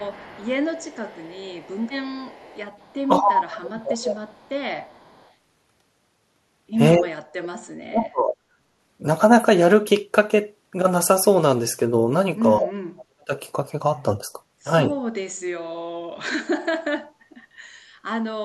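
From 0.0 to 2.95 s, a faint copy of the speech trails it by 218 ms, about 30 dB down. This is an echo leak, likely residue the far side's echo canceller failed to remove. Unlike room reverb, it is a distinct delayed repeat rather than a smooth tail.

From 3.04 to 4.28 s, the speech sinks by up to about 25 dB. This is speech suppressed in double talk, likely the canceller turning down its own talker while the other side speaks. Unlike a network dropout, the dips follow the overlapping talk.

The echo leak returns at 4.3 to 4.5 s and 4.85 to 5.31 s, again 218 ms late and about 35 dB down.

Suppression recurs at 6.96 to 8.37 s, 12.6 to 13.32 s and 15.66 to 16.11 s, with drops of about 40 dB. At 14.84 s there is only a slight dip.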